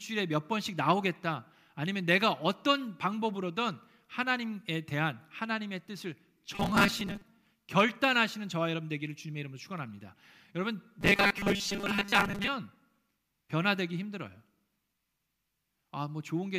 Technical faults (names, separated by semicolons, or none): robotic sound from repeated short buffers